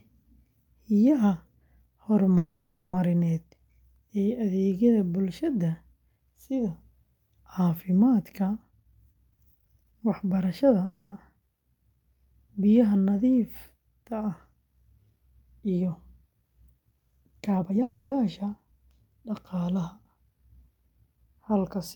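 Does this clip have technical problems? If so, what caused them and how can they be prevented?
Yes. Call audio freezes at 2.37–2.95 s, 10.85–11.14 s and 17.83–18.14 s stretch the last sound into a fading buzz, likely because delayed packets emptied the jitter buffer. The sound then resumes where it stopped, with nothing lost. A wired or less congested connection would keep packets arriving on time.

Jitter buffer speed-up at 8.71–10.81 s (125% speed, roughly half a second removed) and 17.51–17.82 s (150%) plays the sound hurried at unchanged pitch as the buffer sheds pitch-period slices. A steadier network would avoid the bursty arrivals that overfill the buffer.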